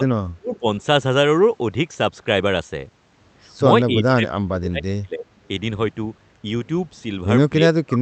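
A speech recording whose level repeatedly collapses and returns, most likely speech suppressed in double talk by an echo canceller ducking its own talker while the far side spoke. The dips fall at 0.00–0.06 s (slight, around 5 dB), 0.36–0.64 s, 3.76–5.25 s and 7.57 s to the end, reaching roughly 25 to 30 dB. Inside the 0.36 s dip, at 0.53–0.59 s, a faint delayed copy of the voice sits about 20 dB under the speech, 287 ms behind it: an echo leak, likely loudspeaker pickup the canceller failed to remove. Its fixed lag separates it from room reverberation, whose tail smears continuously instead.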